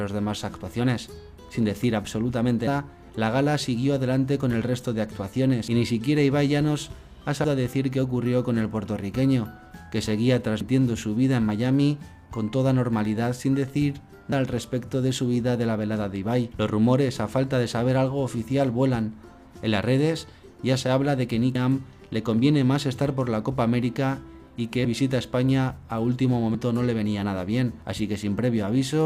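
At 7.44, 10.61, 14.32, 21.55, 24.85 and 26.54 s, compressed frames are skipped: the sound jumps ahead by about 150 to 200 ms, which fits losing a handful of 32 ms frames.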